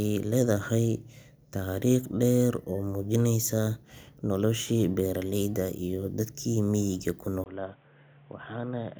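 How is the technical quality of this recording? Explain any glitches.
One glitch occurs near the end. At 7.44 s the input was likely switched to a poorer device, after a brief 20 ms gap. From there to the end, the speech loses everything above 3.8 kHz and sounds dull and boxy. It also drops about 10 dB and gains a faint new background noise.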